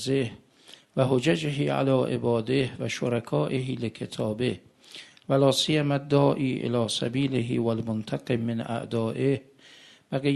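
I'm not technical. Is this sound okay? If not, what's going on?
No. There's clock drift between sender and receiver: the sending device's clock runs about 2% slow, so the audio keeps arriving slightly behind. Unlike a single dropout, this is a steady mismatch across the whole clip.

To keep up, the receiver makes repeated timing corrections from 0.30 to 9.31 s, repeating tiny pieces at uneven intervals. This adds roughly a fifth of a second, spread out rather than in one obvious gap.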